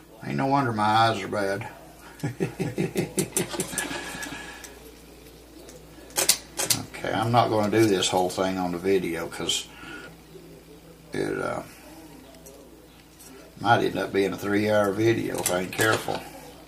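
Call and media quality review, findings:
Doubled audio track, 2.44 to 7.4 s: full-band copy trailing by roughly 0.4 s, about 5 dB down, hard start and stop, no decay. Likely a second capture through a slower path.

Damaged data in compressed stream, 10.07 s: brief glitch; decoder misreads corrupted frames, loses sync, resyncs at next frame header.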